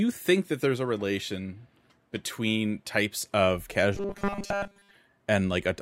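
From about 3.95 s to 4.96 s the speech goes robotic, with that repeated-short-buffer sound: a stiff, metallic buzz at 200 Hz that still loosely tracks the words. The likely cause is audio arriving too slowly, so the playback side keeps looping its last snippet while real audio gets dropped. A 200 Hz buzz fits a loop of about 5 ms, and it sounds like most of that second is repeats rather than fresh signal.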